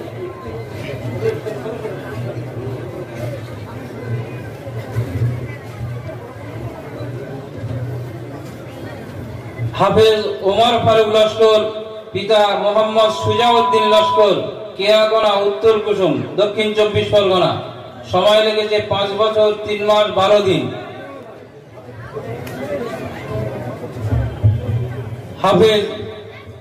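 At 3.25 s, 15.23 s and 21.23 s the audio skips forward abruptly, losing a few milliseconds each time with no silence at the join. This is likely audio missing between chunks: a 6-second processing block drops a sliver at each handover.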